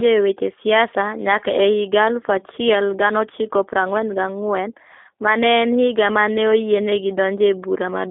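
From start to finish the speech carries G.729 codec damage, plainly audible. The codec rebuilds each frame from a vocal tract model, a pitch predictor and a few coded pulses, so voiced sounds come across slightly rough and synthetic, in the manner of an 8 kbit/s G.729A coder. The line band sits at roughly 250 Hz to 3.5 kHz, and nothing above 3.6 kHz survives, leaving sibilants dull and the low end thin.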